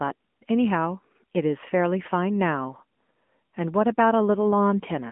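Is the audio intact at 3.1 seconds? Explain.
No, at 3.1 s you're still hearing the AMR narrowband mobile codec, which runs the whole clip. It rebuilds speech from a vocal-tract model fed by sparse pulses, and nothing passes above 3.6 kHz. The voice sounds boxed-in and plainly buzzy, consistent with a mid-rate mode around 10 kbps.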